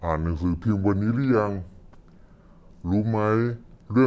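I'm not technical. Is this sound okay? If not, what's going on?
No. From start to finish the speech sounds slowed down and deep, running at about two-thirds of its proper speed, with the pitch dropped by about seven semitones, a little over half an octave. This is a wrong sample rate fault: the audio is being played back slower than it was recorded, so speed and pitch fall together. The amount fits audio recorded at 24 kHz being played as if it were 16 kHz.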